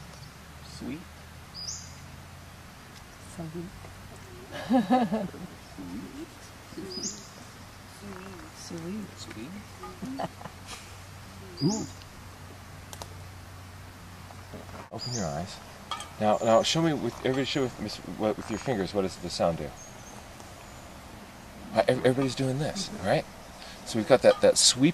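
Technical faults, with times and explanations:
Nothing in the recording stood out as a technical problem on listening.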